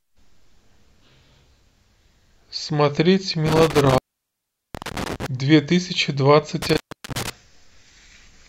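Speech with an intermittent contact: a loose plug or cable opens around 3.46–5.26 s (about 0.77 s dropout) and 6.62–7.30 s (about 0.38 s), crackling at the edges with hiss between.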